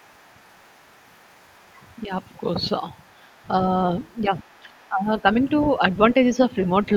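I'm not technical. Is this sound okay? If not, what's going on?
No, not quite. There's the other side's voice leaking through: a very faint second voice under the speaker from 0 to 2.37 s, 2.99 to 3.47 s, 4.0 to 4.88 s and 5.48 to 5.67 s, likely loudspeaker echo that the call's echo removal didn't fully clean out.

Around 4.28 to 5.11 s you'll also hear speech suppressed in double talk. Both sides were talking at once, and the speaker's voice dips noticeably in bits, adding up to under half a second, likely because the echo removal turned everything down to fight that echo.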